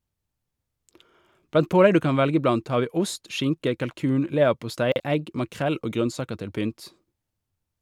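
Chunks out of order at 4.92 to 5.00 s, after "ost skinke kalkun leverpostei", and 7.04 to 7.12 s, after "grønnsaker til", in this speech clip: a 40 ms chunk arrives one chunk late and plays after its successor, giving a brief jumbled moment with three hard joins.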